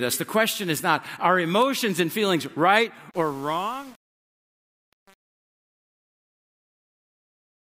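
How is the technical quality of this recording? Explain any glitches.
The recording has one clear fault. From 3.11 s to the end at 7.78 s, the fade-out shows truncation distortion. The undithered gain stage, which fits about 7-bit resolution, turns the fading waveform into coarse steps that sound gritty.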